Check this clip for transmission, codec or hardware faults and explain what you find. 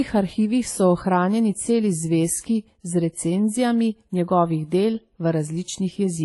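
One codec fault runs through the whole clip. The speech stops dead at 11.5 kHz. Two different kinds of coding artefact sit on top of each other. The likely cause is transcoding between lossy codecs. The sound fits a low-rate AAC stage near 32 kbit/s, later re-encoded as WMA at about 64 kbit/s. The second encoder spent bits copying the first one's artefacts, then added its own. The 11.5 kHz ceiling survived both stages.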